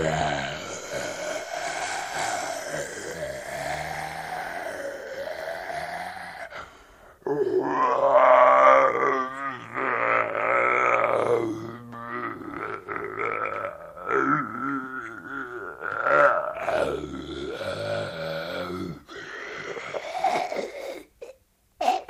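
No technical faults can be heard in this recording.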